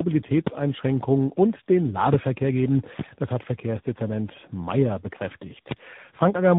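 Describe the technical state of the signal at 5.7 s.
A single sharp pop, roughly 20 dB above the speech, hits from 5.71 to 5.74 s. This loud pop is likely a voltage spike from a plug, switch or static discharge. Underneath it, the speech sounds rough, muffled and warbly, with nothing above 3.8 kHz. This is tandem speech coding: AMR-NB, G.726 and AMR-NB again each re-encode the previous codec's degraded output.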